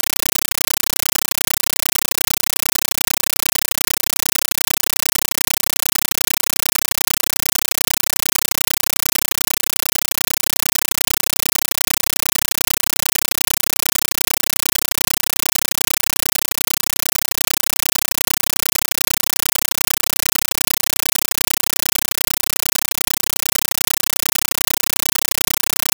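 Compressed stream played as audio, from start to finish: the speech is entirely replaced by harsh, very loud chattering static. A Dolby Digital (AC-3) bitstream is being passed to the output as if it were ordinary PCM samples, without decoding. Each coded frame arrives as roughly 9.33 ms of dense noise followed by silent padding, repeating 31.25 times a second, which gives the static its rapid buzzing pulse. The density fits a 448 kbps stream.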